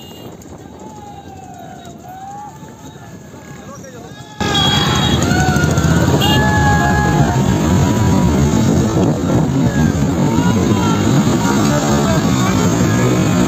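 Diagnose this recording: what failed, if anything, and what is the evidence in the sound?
From 0 to 4.41 s the level drops by about 20 dB. The likely cause is one channel inverted in the analogue wiring. Summing the two channels to mono cancels what they share. Only their small difference remains.

From 6.36 s to the end, the pace slows abruptly to 0.53 times normal speed. The pitch does not change. This is likely a time-stretched section, made in software before storage. Short pieces were repeated to lengthen the audio, so it drags.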